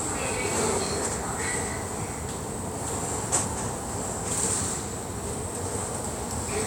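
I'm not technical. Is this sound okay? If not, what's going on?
No. There are frames out of order at 1.05 to 1.17 s, 3.28 to 3.58 s and 5.41 to 5.53 s. In each spot, two short neighbouring pieces of the sound were played in swapped order: the second piece came first, then the first. That makes a brief garbled flutter. The first and last swaps use pieces about 46 ms long. The middle one uses longer pieces of about 139 ms. No sound is missing; it is just rearranged.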